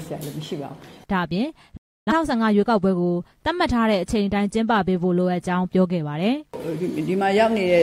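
At 1.77 s the audio drops out in a digital broadcast dropout and returns at 2.12 s. The receiver stopped getting valid frames and muted, fading down over about 3 ms rather than cutting with a click. The lost stretch, roughly 0.3 s, fits a run of several consecutive bad frames. Unlike packet-loss concealment, nothing is smeared or repeated across the hole, and unlike a buffer underrun, the material is skipped rather than delayed.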